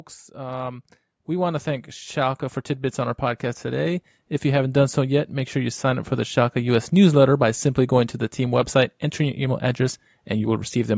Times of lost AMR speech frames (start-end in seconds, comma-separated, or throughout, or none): none